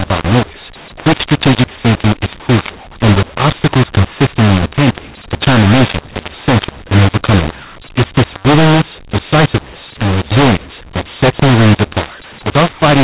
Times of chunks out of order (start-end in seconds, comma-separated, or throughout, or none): none